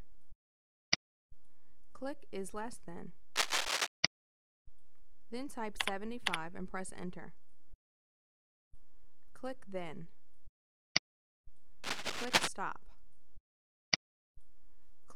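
Bursts of scratchy, rustling noise sit over the sound from 3.36 to 3.88 s and again from 11.84 to 12.48 s, a few decibels louder than the sound itself. This cable scratch noise is likely a worn lead or connector being moved.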